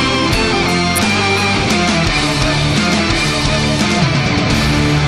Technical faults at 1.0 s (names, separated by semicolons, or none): electrical switching spike